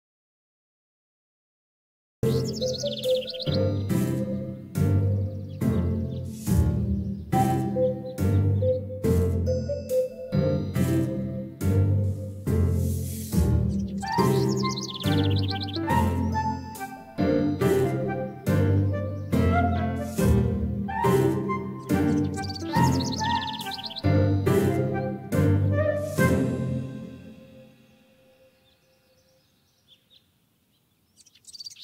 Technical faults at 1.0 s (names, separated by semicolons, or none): audio dropout to silence